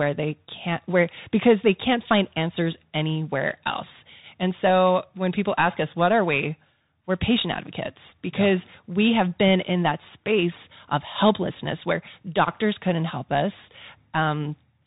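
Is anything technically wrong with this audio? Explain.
Yes. Throughout the speech, a Bluetooth CVSD headset codec is plainly audible, which fits a 64 kbps stream. Each bit only nudges the signal up or down with an adapting step, so fast loud highs outrun it. The s sounds turn scratchy over a granular hiss. A spectrogram shows nothing above 3.8 kHz, and the waveform looks finely stepped.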